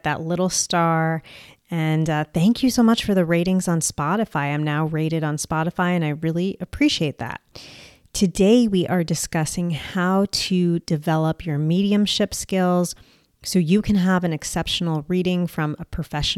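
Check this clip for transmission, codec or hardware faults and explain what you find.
Nothing in this speech recording points to a problem with how it was sent, encoded or captured. There is no event to place in time and no value to report.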